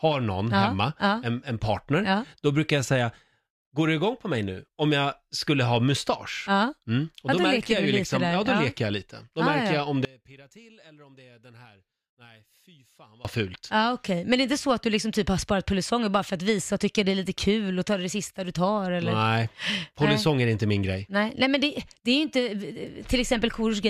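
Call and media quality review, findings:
Speech collapses to a faint residue from 10.05 to 13.25 s, right after "märker ja jag om", level down about 27 dB. Likely one channel inverted in the stereo path, so the centred speech cancels on mono summing, leaving only the channel difference.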